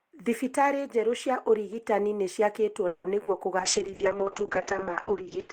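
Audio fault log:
2.87–3.06 s, call audio freeze: packets likely stalled and the jitter buffer ran dry after "njerũ ũrigitani nĩciakĩtwo", so 170 ms of fading continuation is inserted, then speech resumes intact.
3.18–3.21 s and 3.23–3.29 s, short concealed packet loss: brief chunks missed the decoder and were patched by extrapolating the preceding sound, heard as quick smears or wobbles.
3.6 s to end, call bitrate drop: the encoder fell from 32 to 6 kbps and its bandwidth from 20 kHz to 8 kHz, so speech turns coarse, watery and muffled.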